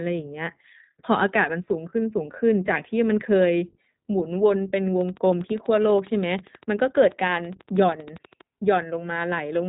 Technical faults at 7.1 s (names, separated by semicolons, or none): iLBC codec; train of clicks